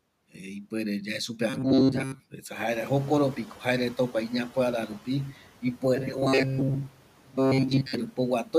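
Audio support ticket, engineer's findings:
Robotic sound from repeated short buffers, 1.50–2.21 s and 5.96–7.94 s. Rigid metallic buzz at 133 Hz; speech contour still roughly followed. Likely cause: playout starved, concealment looping the last ~7.5 ms block, which fits a buffer of that length. Most of the real audio is skipped, and the loop period imposes the fixed pitch. Same buzz frequency both times.

Noise suppressor catching up, 2.71–4.98 s. Room noise jumps about 16 dB near 2.5 s and initially passes with little reduction. The suppressor's noise estimate lags, then adapts over 2.27 s, finally cutting about 8 dB. The room noise itself is not a fault and settles about 21 dB below the speech.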